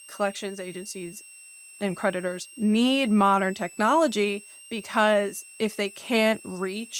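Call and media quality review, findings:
Switching supply whistle throughout the speech. High tone drifting between 2.64 and 2.80 kHz, roughly 25 dB under the speech. Probable switching power supply in audible burst mode. Its load-dependent pitch drift separates it from fixed-pitch mains hum.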